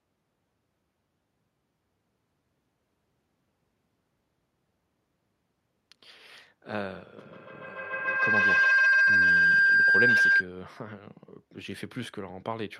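Feedback howl, 7.17 to 10.52 s: a microphone-loudspeaker loop gains level each trip, swelling into a tone near 1.5 kHz, about 13 dB over the speech, pulsing about every 150 ms.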